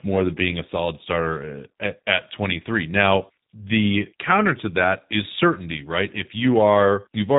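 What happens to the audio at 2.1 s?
At 2.1 s the speech sounds rough, slightly synthetic and dull, with nothing above 3.8 kHz. This is G.729 codec damage, present throughout and consistent with an 8 kbit/s stream. The speech is rebuilt from a vocal tract model and a few pulses per frame.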